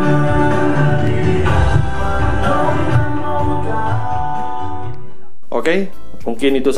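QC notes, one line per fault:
Throughout, DC offset: the entire waveform sits displaced from the zero line by a constant amount, at about -16 dBFS. Because a fixed shift carries no vibration, the ear does not pick it up as a tone or noise; instead it shows on a spectrum as steady energy at 0 Hz, at the very bottom. The cost is headroom: the signal swings around a raised centre, so it reaches its limit sooner in one direction.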